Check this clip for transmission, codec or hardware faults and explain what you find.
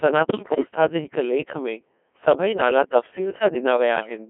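Two faults are present: a very low-rate vocoder colouring the whole speech clip, and a burst of channel corruption near the start.

Codec 2 vocoder, throughout: the speech is rebuilt from sine waves driven by pitch, voicing, energy and a spectral envelope rather than from the waveform, in a band of 200 Hz to 3.4 kHz. Damage is heavy, so the result sounds robotic and buzzy, consistent with roughly 1.6 kbit/s.

Bit errors on digital voice radio, 0.28 to 0.68 s, just before "जे हिकु लेखु में": with a high error rate, around one bit in seven, corrupted parameters reach about nine frames. Pitch, level and tone colour jump abruptly, collapsing into bleeps, warbles and robotic gibberish.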